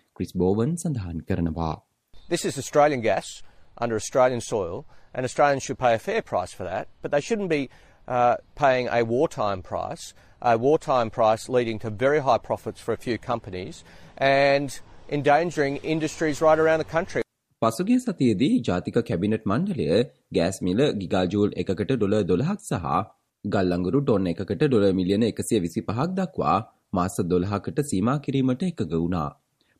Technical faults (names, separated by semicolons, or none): none